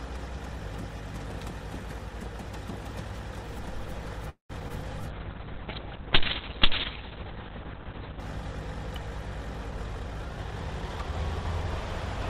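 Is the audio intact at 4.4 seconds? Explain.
No. A call audio freeze runs from 4.29 to 4.52 s: the last sound is stretched into a fading buzz, then about 120 ms of silence, likely from delayed packets draining the jitter buffer. Nothing is lost; the audio resumes where it stopped, about 0.2 s later.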